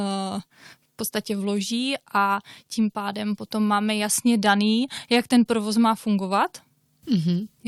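No technical faults are audible.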